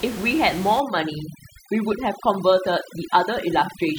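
From 0.8 s to the end, the background drops and breaks up into twinkling specks. This is overdone noise removal. The room noise, sitting about 14 dB below the speech, was handled by a noise reduction stage set far too aggressively. It shut down any frequency band that came close to its noise estimate, and the quieter parts of the voice were cut away along with the noise.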